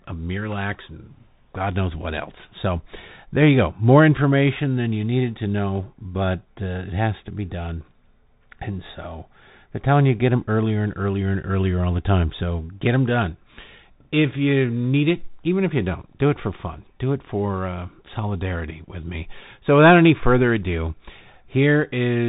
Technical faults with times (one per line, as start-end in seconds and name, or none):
0.00-22.29 Bluetooth CVSD headset codec